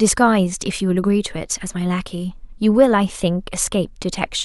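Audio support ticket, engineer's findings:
No audible faults found in the speech signal: level, continuity and tonal balance hold steady throughout, with nothing to attribute to any component in the path.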